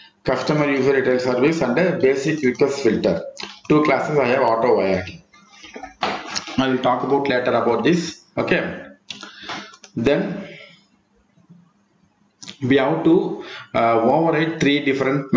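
Gain pumping runs through the whole clip. The gain swings by around 15 dB, pulled down under each loud sound. The likely cause is input gain set far too high, with a fast limiter clamping it down. Loud and soft parts sit squashed together, within the call's band-limited sound, which stops at 8 kHz.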